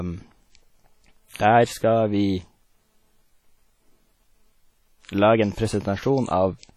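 Speech with heavy WMA-style compression throughout: ringing, washy transients and hiss that breathes with the voice, with nothing above 18.8 kHz, likely a low bitrate around 32 kbps.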